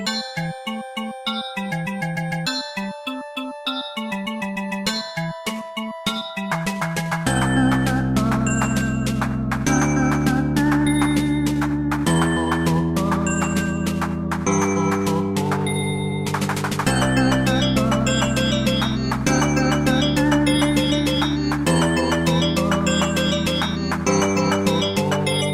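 Nothing stood out as a technical fault on listening to these sounds.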